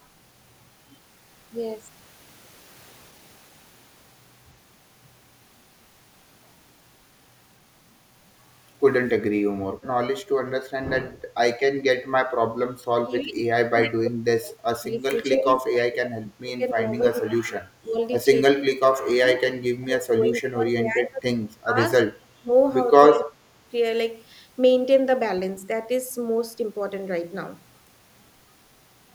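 At 11.13 to 11.35 s the room background is gated by the echo canceller: with the loudspeaker active, it pulls the microphone down by about 8 dB, so the ambience briefly sinks for roughly a fifth of a second, then recovers once suppression releases.

From 12.65 s the speech is suppressed in double talk, likely because the canceller cannot tell near-end speech from loudspeaker echo while both sides talk. The speech dips by as much as roughly 35 dB and breaks up at 12.65 to 16.92, 17.11 to 17.53, 17.81 to 18.0, 18.53 to 19.41, 19.78 to 21.8, 22.01 to 22.51 and 23.1 to 23.39 s.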